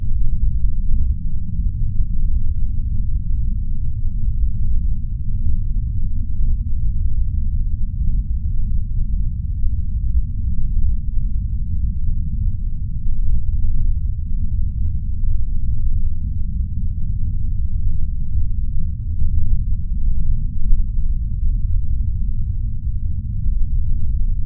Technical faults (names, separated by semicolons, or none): none